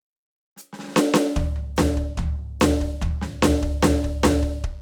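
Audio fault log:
3.07–4.82 s, mains buzz: a steady, raspy buzz enters under the music and stays to the end, sitting well below it at roughly 35 dB down. Sharp switching spikes on a 50 Hz supply, twice per cycle, leak into the signal, spraying harmonics up into the kHz range.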